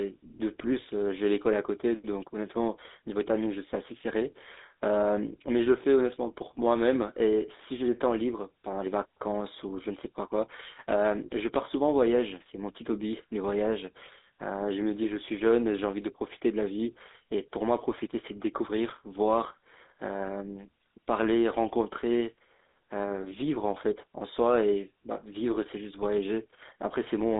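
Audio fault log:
throughout, GSM full-rate codec: the speech has a plainly audible buzzy, gravelly roughness, since a vocal-tract model is driven by sparse, evenly spaced pulses. The band spans 250 Hz to 3.7 kHz, with nothing above 3.8 kHz, which fits 13 kbps GSM.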